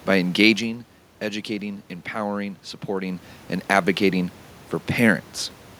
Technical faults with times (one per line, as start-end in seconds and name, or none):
none